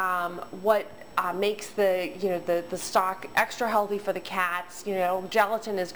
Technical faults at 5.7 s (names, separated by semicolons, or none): crude rate conversion